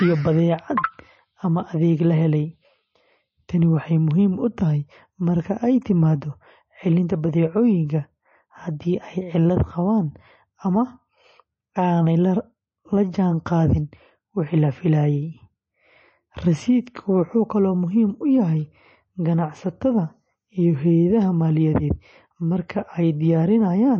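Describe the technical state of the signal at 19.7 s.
At 19.7 s the speech carries the same plainly audible MP3 compression damage heard across the whole clip, likely from an encoder starved of bits, which fits a bitrate near 32 kbps. Nothing survives above 8.3 kHz, and weak frequency lines flicker between frames, giving a watery, swirling texture and chirpy s sounds that a simple low-pass filter would not produce.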